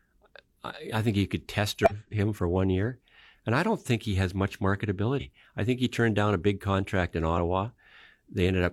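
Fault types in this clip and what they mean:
compressed frames skipped: whole coded frames were missing or rejected by the decoder as damaged, so playback jumps forward. After "think you could test" roughly a fifth of a second vanishes, and after "think he has much" a shorter slice.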